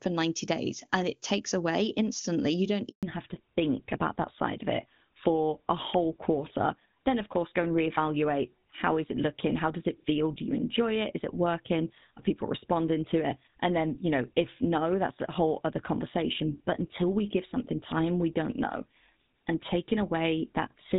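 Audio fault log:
2.89 to 3.03 s, handover gap: The call switched from one network to another, and for about 140 ms no speech frames got through while the new link was set up. The speech fades out within a few tens of milliseconds and then drops into flat silence until the connection resumes. The receiving end had nothing to decode during the switch, so the sound from that stretch is lost and cannot be recovered.
3.03 to 20.98 s, fallback to narrowband: Right after the handover, the call stopped using HD Voice and renegotiated down to an older narrowband codec. The wideband stretch before the gap sounds clean, consistent with AMR-WB at around 23.85 kbit/s, and what follows fits GSM full rate at 13 kbit/s. From the switch onward, nothing remains above 4 kHz. The sibilants lose their sharpness and the airy upper range disappears, and the speech sounds duller, boxier and rougher for the rest of the clip.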